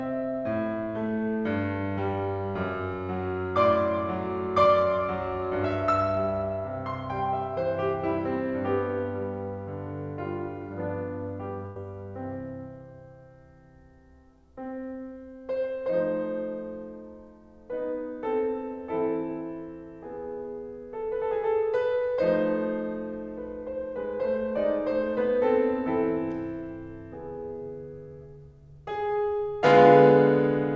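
At 11.66 s a burst of packet loss hits: a run of packets never reached the player in time, leaving a hole of about 0.1 s until 11.78 s. The receiver covered roughly 96 ms by repeating the last stretch of music while steadily turning it down, so the music freezes into a fading smear. Playback then picks up about 100 ms further along, with that part missing, and the band-limited, below-8 kHz sound of the G.722 link continues.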